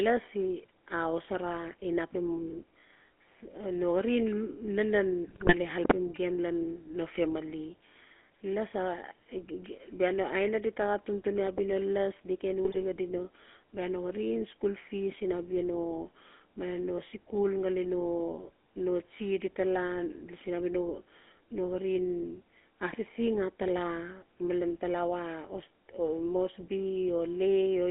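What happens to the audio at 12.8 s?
At 12.8 s the audio is inside a burst of GSM bit errors running from 12.64 to 12.83 s. Corrupted bits in the decoder's filter, pitch and gain parameters warp the spectrum and throw the level around frame by frame, so the speech breaks into squawks, pops and gargling.

Underneath, the GSM full-rate codec is active across the whole clip. It rebuilds speech from a vocal-tract model driven by sparse, regularly spaced pulses, which fits a 13 kbps full-rate stream. Band-limited to roughly 250 Hz to 3.4 kHz, it leaves a plainly audible buzzy, gravelly roughness.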